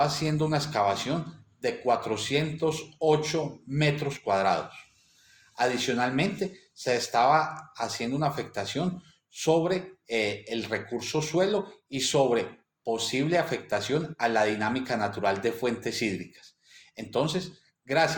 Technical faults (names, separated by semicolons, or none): none